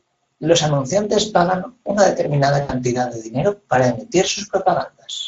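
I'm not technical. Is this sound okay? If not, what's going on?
No. Throughout the clip, the speech has the hoarse, grainy, rough quality of the Speex codec, an older speech compressor used in internet calls and game chat. It kept too little detail of the voice, so the speech sounds noticeably rougher and noisier than the original.

From 2.61 to 2.72 s there is VoIP packet loss concealed by the speech codec. About 80 ms of audio went missing, which fits four lost 20 ms chunks. The decoder filled the gap by stretching the last bit of voice into a buzzy tone or a coloured noise that fades. The speech stays weak briefly after returning.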